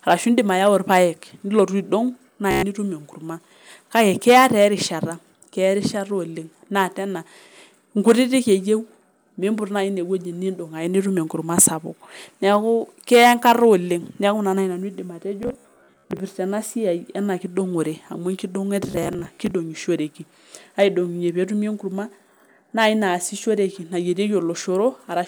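A buzzing, machine-gun stutter breaks the speech at 2.51 to 2.63 s, with about 0.12 s of audio missing. It returns in scattered bursts from 15.43 to 16.19 s, just before "ena siai ena", losing about 0.41 s, and from 18.87 to 19.51 s, losing about 0.25 s. This is Bluetooth stutter. Packets arrived late or not at all, so the receiver kept replaying its last buffer, and the speech picks up further along, as if it had kept playing.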